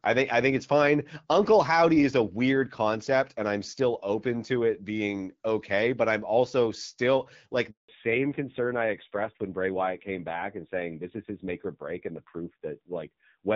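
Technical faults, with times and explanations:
7.71 to 7.89 s, handover gap: Right after "I'm also still", the speech fades within a few tens of milliseconds and gives way to 180 ms of silence. This is the call being passed from one network to another. While the connection switched, no speech frames arrived, so the decoder had nothing to play until the new link began carrying audio. The syllables spoken in that window are simply gone and cannot be recovered.
7.89 s to the end, fallback to narrowband: From the moment the speech resumes, nothing above 4 kHz remains, and the voice turns dull and boxy with a rough, grainy edge. Before the gap the call ran on the AMR wideband (HD Voice) codec, whose light coding damage sounds like a rate around 12.65 kbit/s. After the handover it dropped to the older narrowband AMR codec, and the rasp fits its low 5.9 kbit/s mode.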